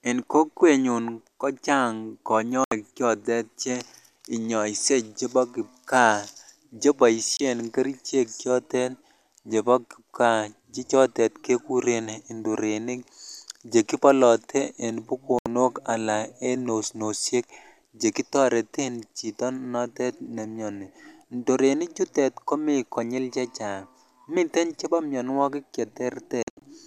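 Speech with a digital broadcast dropout at four points: 2.64–2.72 s, 7.37–7.40 s, 15.39–15.46 s, and 26.43–26.62 s. Each time, the receiver stopped getting decodable frames and muted until clean ones returned, so the programme material in those gaps is lost. The holes are 72 ms, 24 ms and 72 ms long, which fits whole 24 ms frames being discarded. The last event breaks into several short holes totalling 144 ms, the longest 72 ms.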